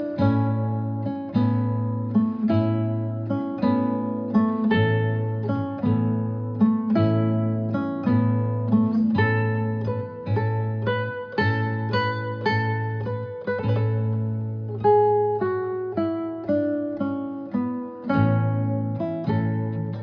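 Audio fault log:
None: no audible defects found anywhere in the clip.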